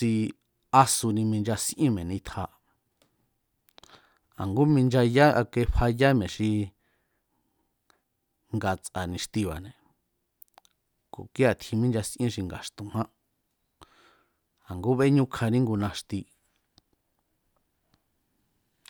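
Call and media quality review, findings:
Call and media quality review findings: no faults found in this speech clip.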